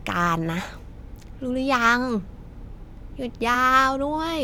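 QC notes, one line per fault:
3.54 s, compressed frames skipped: the speech jumps forward by roughly 30 ms, which fits about three missing 10 ms frames that were absent from the stream or rejected as damaged by the decoder. The playback simply resumes at a later point, with a small piece of the speech missing.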